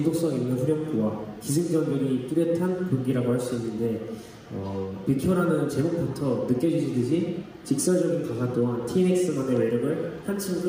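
No technical faults can be heard anywhere in the audio, which stays continuous and steady throughout.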